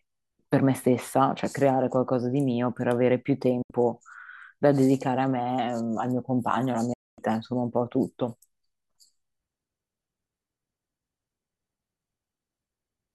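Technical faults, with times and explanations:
3.62 to 3.71 s and 6.93 to 7.19 s, digital broadcast dropout: the speech fades out within 8 ms and goes silent for 72 ms, then 240 ms. The receiver muted on missing or corrupt frames, fitting roughly three and ten lost frames, and that audio is gone.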